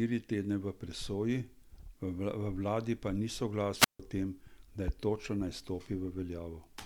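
At 3.75 s, just after "vladi pa ni", the analogue radio link weakens until the receiver's squelch shuts the output: a wireless microphone squelch dropout. Hiss rises briefly, the speech falls into a near-silent hole of about 153 ms, then returns by 4.01 s.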